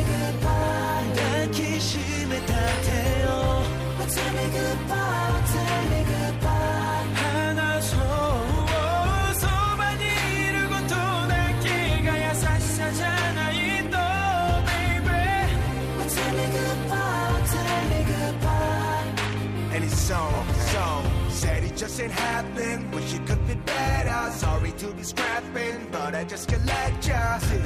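No technical faults are audible anywhere in the recording.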